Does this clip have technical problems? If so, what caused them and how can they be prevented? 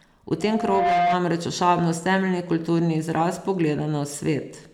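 Yes. A loudspeaker feedback squeal runs from 0.40 to 1.22 s, just before "ošabnost temeljni". A 702 Hz tone swells over about half a second to roughly 5 dB above the speech. The microphone was picking up its own loudspeaker, and at that frequency the loop gain exceeded one. Prevent it by keeping loudspeakers away from and behind the microphone, lowering gain, or notching out 702 Hz.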